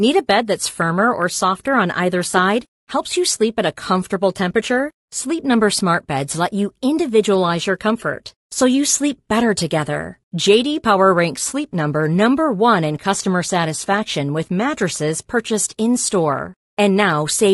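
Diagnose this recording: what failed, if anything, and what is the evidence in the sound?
Codec stage: the speech is rough and grainy throughout, with noise filling the gaps between harmonics and a thin, synthetic-sounding top band. This is likely low-delay AAC compression (AAC-ELD); its short frames resolve pitch poorly, and the damage fits a bitrate around 32 kbps.

Network and codec stage: AAC frame loss with concealment occurs from 2.31 to 2.34 s, just after "or softer on either". There is a brief smeared, noisy patch about 20 ms long, consistent with one lost frame that the decoder rebuilt from the previous spectrum.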